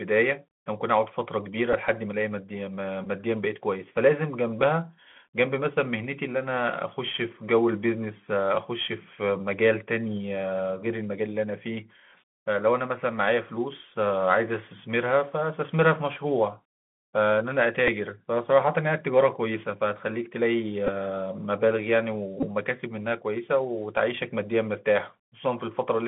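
Throughout the speech, the Bluetooth CVSD headset codec confines the sound to roughly 200 Hz to 3.5 kHz. Its one-bit up/down coding, consistent with a 64 kbps link, leaves a granular hiss and scratchy, overloaded s sounds, unlike the cleaner band-limiting of a plain telephone filter.

Bluetooth headset packet repeats occur at 1.73 s, 3.04–3.07 s, 17.87 s, 20.87–20.89 s and 22.40–22.45 s, spanning about 7.5 to 22.5 ms of lost audio. Replaying the previous packet's bits gives a brief buzz near 267 Hz, rather than a silent gap.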